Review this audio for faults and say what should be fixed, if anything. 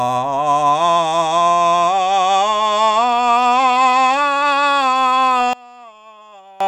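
One channel inverted, from 5.53 to 6.60 s: the music falls by about 25 dB in mono, leaving only a faint remnant. The likely cause is reversed polarity on one stereo side, so everything shared between channels cancels when summed, including centred parts. Checking per-channel polarity and auditioning a mono fold-down before export would prevent this.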